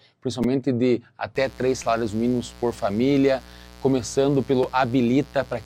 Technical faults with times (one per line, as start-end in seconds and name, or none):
0.44 repeated buffer
1.35-5.65 mains buzz
1.83 repeated buffer
4.63 repeated buffer